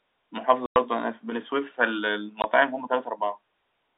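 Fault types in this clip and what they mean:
Packet loss filled with silence: packets failed to arrive and the receiver inserted digital silence instead of concealing the gap, so the speech drops out abruptly with hard edges. Two holes are audible, a 100 ms gap from 0.66 to 0.76 s and a 20 ms gap at 2.42 s. The lengths fit a 20 ms packet interval, with about five consecutive packets missing in the longer gap, while the G.711 telephone band carries the surrounding speech.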